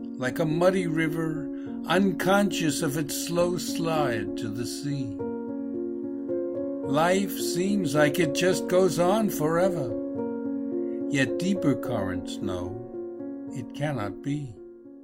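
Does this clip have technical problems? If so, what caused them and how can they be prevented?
No, there are no technical faults to report in this clip, so nothing needs preventing.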